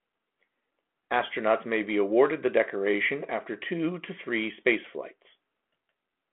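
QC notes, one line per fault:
Speech is carried over a telephone-band channel of about 250 Hz to 3.4 kHz with nothing above 3.8 kHz, and its light, level-following coding texture fits G.726 ADPCM at 32 kbit/s.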